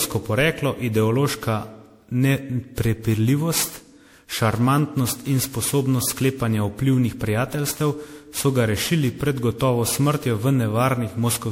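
Likely repeated MP3 re-encoding, about ten passes at what sounds like 96 kbit/s, causes generation loss throughout: swirly, hollow, smeared speech with blurred attacks, nothing above 18.9 kHz.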